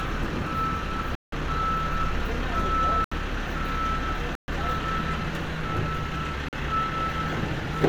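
At 1.15, 3.04, 4.35 and 6.49 s the sound drops into a block of digital silence lasting about 171, 72, 128 and 43 ms, cutting out and back with no fade. The output buffer likely went unfilled in time; the 171 ms and 43 ms gaps fit 8192- and 2048-sample blocks at 48 kHz.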